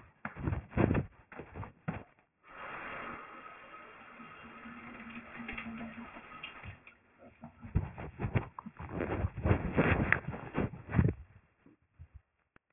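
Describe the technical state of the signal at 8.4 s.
Aliasing is present at 8.4 s, as it is across the whole clip. The sound fits a drop from a 48 kHz rate to about 6 kHz with no anti-alias filter first, so everything above 3 kHz folds back below that edge onto unrelated frequencies. The folded energy sits roughly 10 dB under the signal, loud enough to give high, noisy parts of the sound a gritty, metallic edge, with the spectrum running hard up to 3 kHz.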